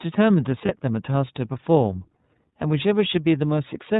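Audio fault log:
throughout, iLBC codec: The speech passes through the narrowband iLBC VoIP codec, at a rate that fits its 13.33 kbps mode with 30 ms frames. Each frame's excitation is coded independently, and nothing above 4 kHz survives, so the voice sounds muffled and lacks sibilant detail. The codec damage is plainly audible: the voice stays clear enough to follow but comes out slightly rough and synthetic, with the coarse texture of a low-rate phone call.
0.65–0.70 s, lost iLBC frames: A short packet loss, about 30 ms of audio and consistent with a single dropped frame, forced the decoder to fill the hole by repeating the last pitch cycle mixed with noise. The gap comes out as a brief held, faintly buzzy vowel in place of the real sound. Because iLBC frames do not depend on earlier frames, the voice returns correctly straight after.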